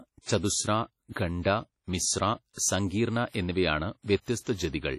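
Throughout the speech, the audio shows heavy transform-codec damage: nothing is present above 12.9 kHz, the top end rings and sounds washy, and a hiss rises and falls with the level of the talker. Weak spectral detail has been dropped outright. The likely cause is WMA compression at a low rate, which fits a bitrate of around 32 kbps, with long transform blocks spreading quantisation noise across tens of milliseconds.

Four attacks carry pre-echo: at 0.38 to 0.43 s (57 ms), 2.53 to 2.58 s (43 ms) just before "സങ്കീർണ എന്നിവയാണ്", 3.29 to 3.34 s (56 ms), and 4.05 to 4.08 s (29 ms) just after "സങ്കീർണ എന്നിവയാണ്". Each sharp onset sat late in a codec block, so noise scaled for the loud part was spread back into the quiet gap ahead of it. The result is a brief hiss leading each attack and a softened, smeared onset.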